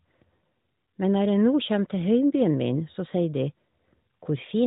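Nothing is technically wrong with this speech recording.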